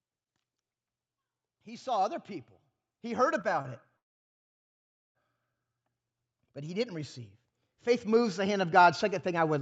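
From 1.64 to 3.79 s, automatic gain rising lifts the speech and its background together by about 7 dB. The control judged the input too quiet and raised it slowly, so the waveform envelope widens steadily and the spectrogram darkens evenly across the whole band, which stops at 8 kHz on this call path.

Two short stalls from late packets fall inside that rise, at 3.41 to 3.46 s and at 3.62 to 3.67 s. Each time, the jitter buffer ran dry and the last sound was stretched for 23 ms and then 29 ms. The result is a brief held smear, seen as a short horizontal streak in the spectrogram.

From 3.97 to 5.17 s, a call audio freeze drops the sound out for about 1.18 s before it resumes where it stopped. The likely cause is delayed packets that emptied the jitter buffer. The waveform goes flat, and the spectrogram shows a blank vertical band.

From 7.71 s to the end, automatic gain rising returns, with speech and background swelling together as the envelope slowly grows.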